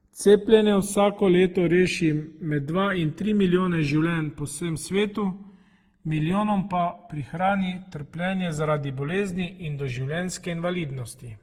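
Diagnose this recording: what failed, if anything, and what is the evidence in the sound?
Throughout the speech a slow flanging sweep drifts through the spectrum when the channels are summed. This is channels drifting apart at the converter stage: two separately clocked devices, roughly 150 ppm apart, let the interchannel delay creep to about 2 ms by the end, sliding the comb notches.

The speech sounds swirly, hollow and smeared for its whole length, with consonant attacks blurred more than a single encode would explain. That points to generation loss in the codec chain, likely from repeated Opus encoding at around 48 kbit/s, roughly seven passes, each requantising on a shifted frame grid.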